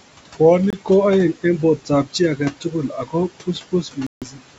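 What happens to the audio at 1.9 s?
At 1.9 s there is speech cut by the noise suppressor, between 1.77 and 2.15 s. The suppressor mistakes part of the speech for noise and turns it down with the background, by up to about 12 dB. About a tenth of a second in total sounds swallowed and faint.

Noise suppressor artifacts are also present here, as throughout the clip. The suppressor lowers the steady room noise by about 18 dB, frame by frame. The remaining noise dips between sounds and rises under them.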